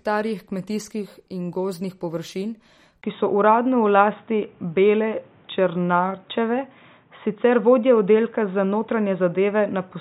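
Speech with plainly audible MP3 compression throughout, most likely the cause of its watery, swirling texture. Weak frequency lines are dropped and return frame by frame, and the sibilants chirp metallically, which fits a low bitrate around 48 kbps. On a spectrogram the energy stops at a flat ceiling near 16 kHz, and beneath it isolated patches of detail flicker on and off instead of forming smooth bands. At 3.02 s the input switched to a poorer device, most likely to another microphone or a headset call profile. A gap of about 20 ms marks the switch, visible as a thin blank stripe in the waveform. From there to the end the sound turns dull and boxy, with nothing above 3.8 kHz, so the spectrogram shows a hard lid at that height. The overall level also shifts by roughly 5 dB, and a new noise floor appears about 35 dB below the speech.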